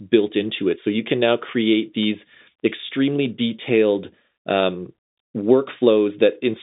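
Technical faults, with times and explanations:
No technical faults are audible.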